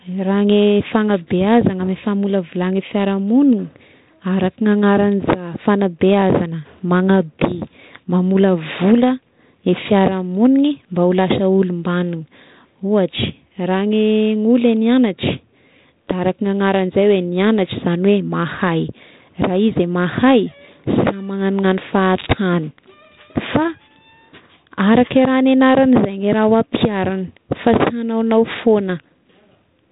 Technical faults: none

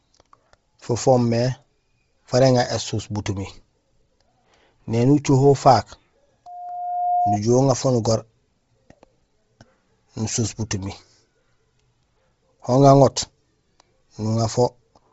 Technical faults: Bluetooth LC3 compression; loudspeaker feedback squeal

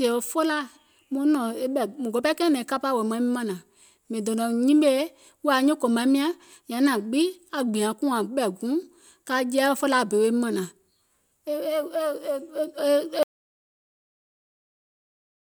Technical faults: audio dropout to silence

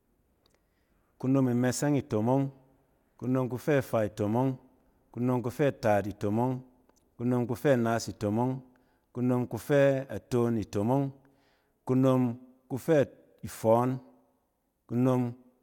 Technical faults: none

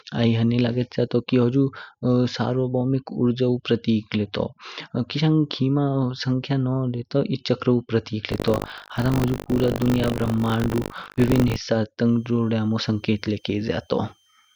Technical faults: buffer tearing; switching supply whistle

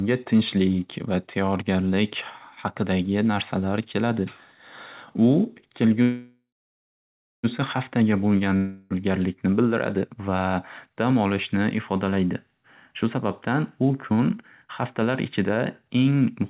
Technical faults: call audio freeze; long network dropout; jitter buffer speed-up

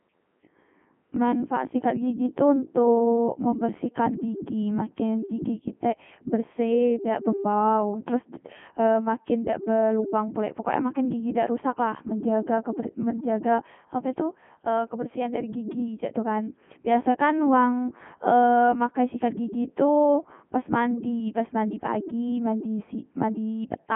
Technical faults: Codec 2 vocoder

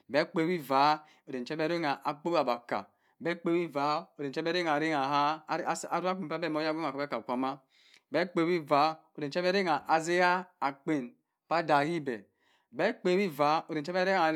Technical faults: none

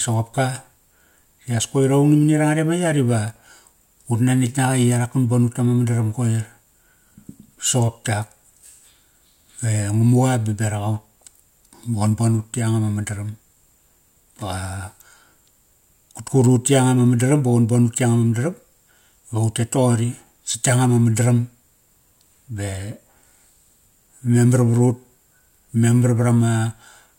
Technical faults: none

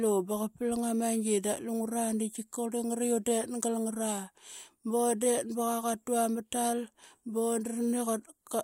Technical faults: none

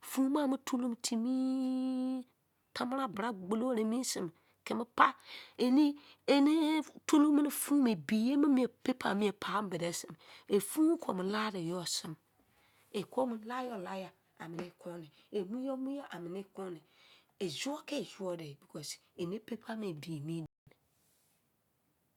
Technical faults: playback stall

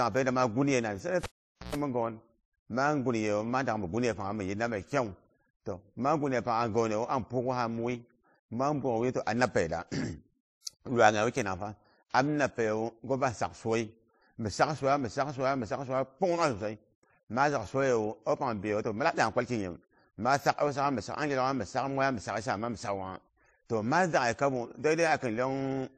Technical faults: transcoding between lossy codecs; cable pulled and plugged in

